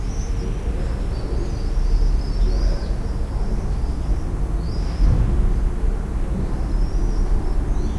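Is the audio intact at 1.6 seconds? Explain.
Yes, at 1.6 seconds the sound plays through intact, with no dropout, click, distortion or other fault.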